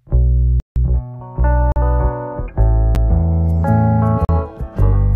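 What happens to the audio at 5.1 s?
Nothing goes wrong at 5.1 s; the audio carries on intact through that moment.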